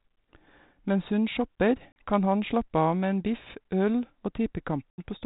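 Packet loss on an ADPCM call at 1.92 to 1.97 s, between "hun shopper" and "kan han slappe av", cuts a 40 ms hard-edged silent hole, which fits about two lost packets. A second gap at 4.91 to 5.0 s lasts 80 ms, likely a few packets. After each gap the decoder's predictor and step size no longer match the sender's, so the speech returns slightly distorted. It settles within tens of milliseconds.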